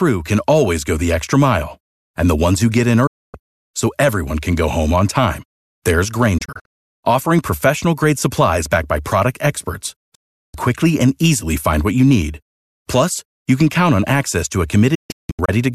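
Digital broadcast dropout: the receiver lost valid frames and muted. Speech fades out within about 8 ms to silence at 3.07–3.35 s and 10.15–10.55 s, and breaks into scattered short holes at 6.38–7.02 s and 14.95–15.49 s. The lost audio never returns.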